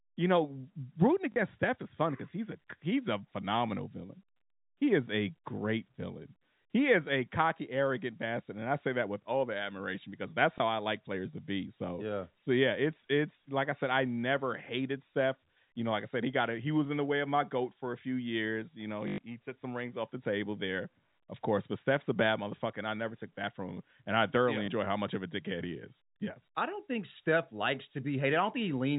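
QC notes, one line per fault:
1.32–1.36 s: packet loss with last packet repeated. 40 ms of sound is replayed rather than silenced, fitting two 20 ms packets, so there is a brief stutter.
10.58–10.60 s: packet loss with last packet repeated. A single 20 ms repeat is heard as a small blip, not a gap.
19.08–19.18 s: packet loss with last packet repeated. A 100 ms repeat run buzzes at about 50 Hz, which fits 20 ms packets, giving a robotic stutter rather than a dropout's silence.
24.66–24.68 s: packet loss with last packet repeated. A 20 ms repeat produces a small blip within the telephone-band audio, with no silent hole as a plain dropout would leave.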